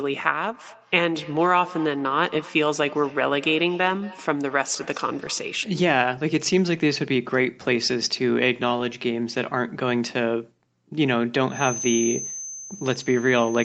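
From 0.53 s to 5.79 s there is feedback echo between two devices. Each phrase comes back in distinct repeats about a fifth of a second apart, each thinner and more ringing than the last, the loudest about 19 dB below the speech. A second device in the room is playing the call, and this microphone picks it up again, beyond the reach of its own echo canceller. Room reverberation would be a smooth tail; this returns as separate copies at a fixed interval.

At 5.25 to 5.31 s, and again at 8.8 s, there is a lost packet rebuilt from error correction. The first patch lasts 40 ms, which fits two separate 20 ms packets; the second lasts 20 ms. The speech does not drop out. It turns briefly rough and grainy because the decoder played the low-bitrate copy carried in the following packet. Plain loss concealment would leave a gap or a smeared, buzzy stretch; this is only a short coarse patch.

From 11.46 s to the end there is a feedback whistle: a thin, steady tone at 6.2 kHz, roughly 10 dB below the speech, swelling and fading slowly in level. 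It is likely caused by a loudspeaker-to-microphone loop held right at the edge of feedback. It differs from a runaway howl because it never grows, and it differs from the echo because it is a single fixed pitch rather than repeats of the speech.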